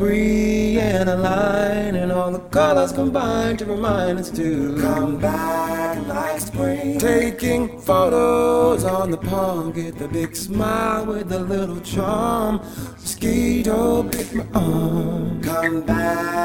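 A metallic buzz runs through the whole audio, the level dipping by about 11 dB roughly 150 times a second. This is overlap-add ripple: windowed frames were recombined with an overlap that never sums to constant gain.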